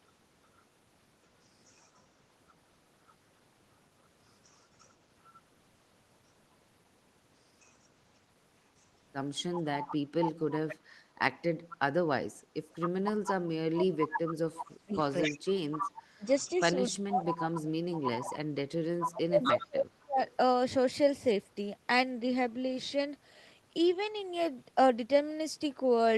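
Echo leak affects this speech recording at 1.65–3.13, 4.44–4.91, 7.61–7.72, 8.8–10.76, 11.69–11.77, 12.79–17.58 and 19.0–20.35 s: a copy of the voice trailing by 254 ms, faint early (about 35 dB down) and growing to about 5 dB below the speech by the end, likely from a loudspeaker echo the far-end canceller failed to remove. Speech suppressed in double talk runs from 13.13 to 20.19 s, where the talker's level dips by as much as about 30 dB, roughly five seconds in total, likely as the canceller, unable to separate talker from echo, turns both down.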